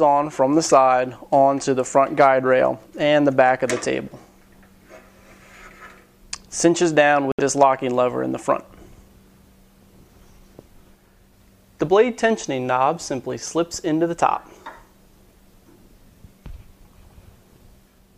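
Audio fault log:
7.32 to 7.40 s, Bluetooth dropout: sound cuts to silence, then resumes further on as if it had kept playing, likely from late packets dropped before the headphones.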